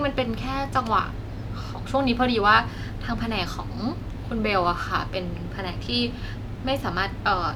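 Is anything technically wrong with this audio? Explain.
No, there's nothing technically wrong here that I can hear; the speech comes across without any problems worth flagging.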